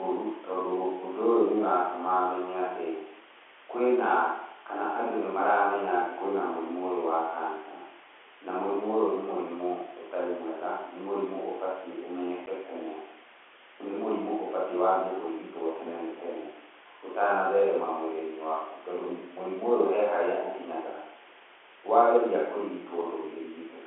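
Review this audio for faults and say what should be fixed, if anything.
At 12.46 s a packet went missing and the receiver played silence in its place, which is packet loss filled with silence. The result is a 10 ms hole in the telephone-band G.711 audio, a length that fits a single lost 10 ms packet, with hard edges. Packet loss concealment, which synthesises a plausible fill from the surrounding audio, would prevent the silent gap.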